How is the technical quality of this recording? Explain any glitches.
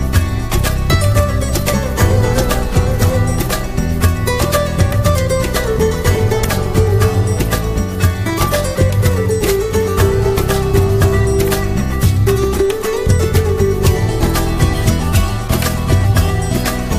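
The recording has four short digital glitches, all the same kind. Damaged data in a compressed stream at 6.43 s, 9.45–9.47 s, 12.56 s and 14.89 s: corrupted bytes make the decoder misread a frame and lose sync until it finds the next header, so each spot comes through as a quick chirp or blip.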